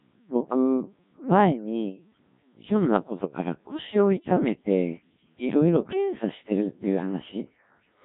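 From the first moment, the speech runs through the Codec 2 vocoder at a rate that sounds like 1.3 kbit/s, and the damage is heavy. Only pitch, voicing, energy and a coarse spectral envelope survive; the decoder rebuilds the voice from sine waves, so it sounds robotic and buzzy. On a spectrogram the harmonics look unnaturally regular and smeared, the formants are blurred, and the waveform bears little resemblance to natural speech.

Between 6.61 and 6.67 s, bit errors on digital voice radio corrupt a stretch about one vocoder frame long, with something like 7 percent of bits flipped. Because each bit steers a whole frame's pitch, level, voicing or envelope, the voice lurches into a brief warbling bleep. The spectrogram shows a sudden jump in harmonic spacing and a shifted formant pattern, and the waveform envelope steps abruptly.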